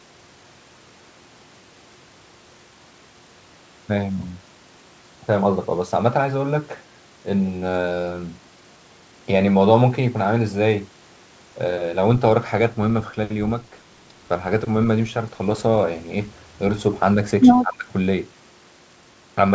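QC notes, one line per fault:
17.62–17.9 s, speech suppressed in double talk: the speech drops by about 25 dB for roughly 0.3 s, likely an echo canceller muting overlapping talk.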